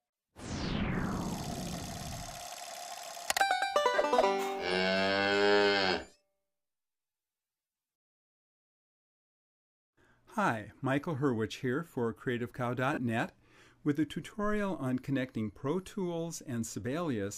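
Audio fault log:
3.96–3.98 s and 12.93–12.98 s, lost LE Audio frames: Bluetooth LE Audio frames went missing, about 15 ms, then 37.5 ms, which fits two and five 7.5 ms frames. The LC3 decoder filled each gap by repeating the last spectrum with randomised signs, so the sound briefly turns into a noisy smear.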